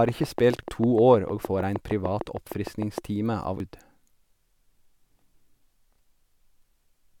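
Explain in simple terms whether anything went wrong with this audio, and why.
A steady ticking runs under the speech from about 0.09 to 2.99 s, around twenty sharp clicks at an even pace of roughly six and a half per second, audible in the pauses as well. This is a train of clicks: each click sounds alike and lands on a regular beat, which points to a repeating electrical pulse, most likely interference from nearby equipment or a faulty connection or power supply, being added on top of the sound.

Separately, there are two brief blips, a short glitch at 0.63 s and another at 3.6 s. These come from damaged data in a compressed stream. A small piece of the stored or transmitted file was corrupted at those points, so the player could not read that stretch properly, briefly produced garbage, and then picked up again at the next part it could make sense of.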